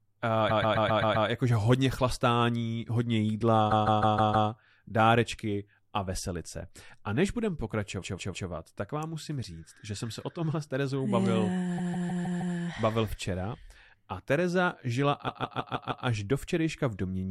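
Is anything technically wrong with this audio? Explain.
Yes. Repeated frames cause the speech to stutter five times: 0.49–1.27 s, 3.70–4.48 s, 8.01–8.48 s, 11.77–12.55 s and 15.27–16.05 s. In each event a short stretch of compressed frames was written or sent more than once, so the decoder plays the same block again and again. The first block is about 131 ms, played six extra times. The later ones are about 157 ms, played three to five extra times, which fits a run of five or six codec frames. The result is a rapid loop, and it adds about 0.47 to 0.78 s to the clip at each event.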